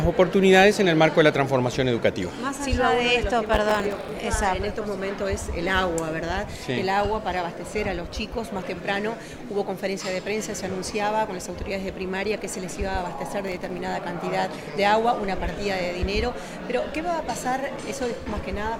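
Two bursts of processor overload crackle tear through the sound, from 3.46 to 4.16 s and more briefly from 13.47 to 13.78 s. The processor missed deadline after deadline, dozens in the first burst, and each missed buffer dropped out as silence. The gaps are very short, pointing to buffers of around 3 ms. On a waveform, both stretches show dense hard-edged dropouts. On a spectrogram, they appear as thin vertical broadband streaks.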